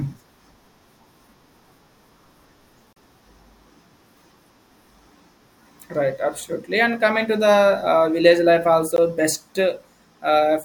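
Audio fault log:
2.93–2.96 s and 8.96 s, gap at a join of encoded pieces: the speech cuts out for 37 ms, then 16 ms, and resumes where it stopped, with smeared edges. Pieces encoded separately, every 6 s, were joined without trimming their encoder delay and end padding.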